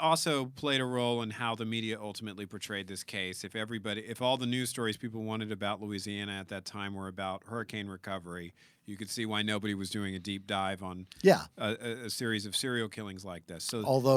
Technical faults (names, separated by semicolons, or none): none